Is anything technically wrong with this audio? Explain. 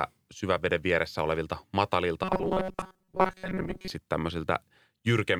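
Yes. From 2.24 to 3.90 s, right after "syväveden vieressä olevilta matalilta", the speech collapses into robotic sound from repeated short buffers. The likely cause is late-arriving audio being covered by looping a chunk of about 5 ms for most of that stretch. The result is a rigid 188 Hz metallic buzz. A spectrogram shows flat, evenly spaced harmonic lines at multiples of 188 Hz, and the waveform shows identical cycles repeating.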